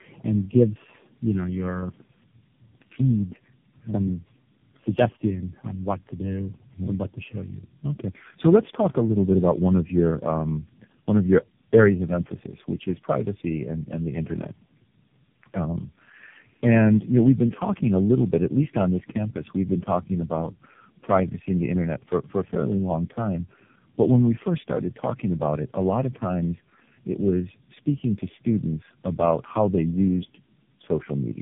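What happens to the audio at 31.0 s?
At 31.0 s the speech sounds rough, muffled and warbly, with nothing above about 3.7 kHz. This is tandem speech coding, present throughout the clip rather than only at that moment. The roughness suggests the call crossed several links with different speech codecs, likely including low-rate ones such as AMR-NB, and was decoded and re-encoded at each boundary. Each coder compressed the previous coder's errors again, so the damage accumulated.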